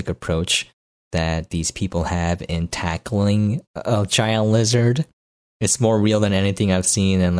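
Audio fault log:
Nothing to log here; the speech comes across without a single problem worth noting.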